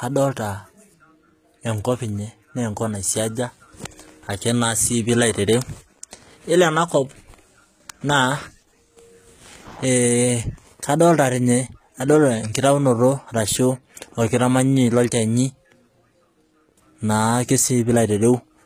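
Speech with gritty, lispy s sounds and bright, metallic treble throughout: likely HE-AAC compression rebuilding the top from copied lower bands, consistent with about 20 kbps.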